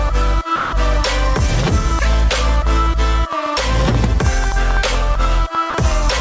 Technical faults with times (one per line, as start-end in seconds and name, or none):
0.56-0.72 sound dropped by the voice detector
1.39-6.21 train of clicks
5.70-5.74 sound dropped by the voice detector